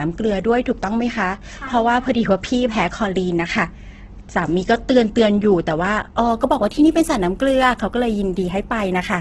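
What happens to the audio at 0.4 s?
Heavy Opus compression, likely at a very low rate around 12 kbps, runs through the whole clip: starved bands get filled with noise, so speech sounds rough and grainy, with nothing above 8 kHz.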